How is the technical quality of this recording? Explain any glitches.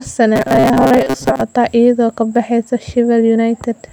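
The recording has one clear glitch. From 0.36 to 1.42 s the speech becomes a rigid, metallic buzz at 133 Hz: robotic sound from repeated short buffers. The likely cause is audio arriving too seldom, so roughly 7.5 ms chunks fill about half that stretch, imposing the fixed pitch while the words remain loosely traceable.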